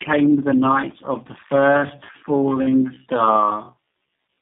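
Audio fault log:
throughout: tandem speech coding; audio passes through three low-rate speech coders in a row, each re-encoding the previous one's output, leaving it rough, warbly and muffled.
1.42–4.41 s: time-stretched section; pace abruptly drops to about 0.67× speed while pitch holds, so the audio drags, likely from pitch-preserving stretching that repeats short segments.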